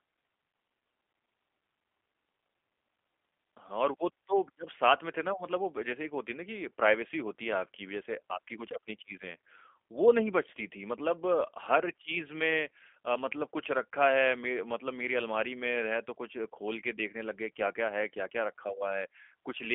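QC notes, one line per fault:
Throughout, G.729 codec: narrow phone-line band, nothing above 3.6 kHz, and a clearly rough, synthetic edge from pulse-coded rebuilding, which fits an 8 kbit/s stream.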